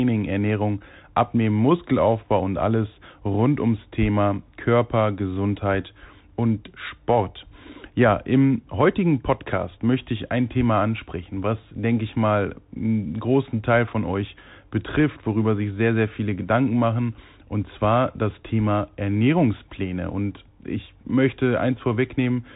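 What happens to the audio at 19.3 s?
At 19.3 s the speech sounds boxed-in and scratchy, with s sounds gritty and a granular hiss underneath. This is the Bluetooth CVSD headset codec, present throughout: one-bit up/down coding, which fits a 64 kbps stream, lags loud high content, and nothing passes above 3.8 kHz.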